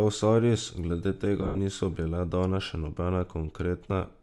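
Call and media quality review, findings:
Bluetooth LC3 compression, throughout: likely LC3 codec coding the link at a reduced rate, upper spectrum zeroed and noise-filled. Result: speech carries a plainly audible breathy, grainy edge at top end, consistent with 10 ms transform frames around 48 kbps.

Lost LE Audio frames, 1.42 to 1.59 s: about 110 ms of frames dropped, scattered across 160 ms, longest gap roughly 70 ms. Decoder concealment repeats last spectrum with randomised signs, fading it, so speech smears into noisy wash and thins.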